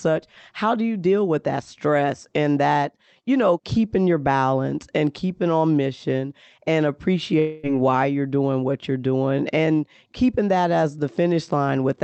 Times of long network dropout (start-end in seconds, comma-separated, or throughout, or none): 7.39-7.66